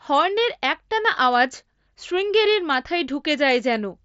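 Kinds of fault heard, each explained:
Nothing stood out on listening to this speech clip.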